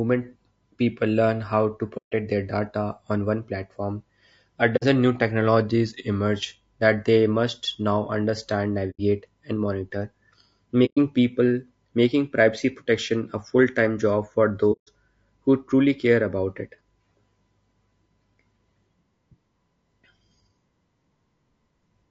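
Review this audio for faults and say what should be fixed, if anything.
The speech sounds rough and grainy throughout, with noise filling the gaps between pitch harmonics and a dull, synthetic-sounding top band. This is likely low-delay AAC compression (AAC-ELD): its short frames resolve harmonics poorly, and the damage fits a bitrate around 32 kbps. Raising the bitrate, or using a longer-frame codec where delay allows, would prevent it.

The sound softly drops out five times, fading away and back: at 1.97 to 2.13 s (150 ms), 4.76 to 4.84 s (60 ms), 8.90 to 9.00 s (90 ms), 10.85 to 10.98 s (120 ms) and 14.72 to 14.89 s (150 ms). This is AAC frame loss with muting. Whole frames went missing and the decoder zeroed their spectrum, so the overlapping windows smear each hole's edges. Forward error correction or packet loss concealment in the decoder would prevent these holes.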